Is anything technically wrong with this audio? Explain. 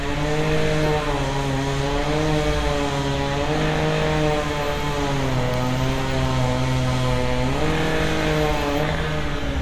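No, nothing technical stands out here; these sounds come through without any audible faults.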